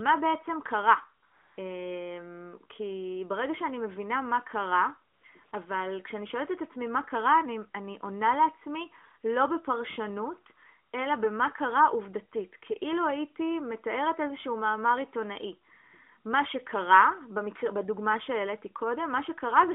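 A steady, smooth hiss takes the place of the real background in brief patches, switching in and out at 1.26 to 1.58 s, 5.14 to 5.24 s, 5.44 to 5.52 s and 10.92 to 10.94 s. This is AMR comfort noise. The phone judged the talker silent and stopped sending speech frames, so the receiver filled each gap with synthetic noise built from a rough description of the background. The longest patch is 320 ms, and the shortest lasts only a single 20 ms frame. The AMR narrowband coding around these patches limits the sound to a 250 to 3500 Hz line band, with the light coloration expected from 12.2 kbps mode.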